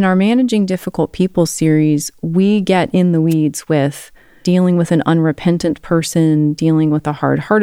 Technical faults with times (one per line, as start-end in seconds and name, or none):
3.30-3.34 wireless microphone noise hit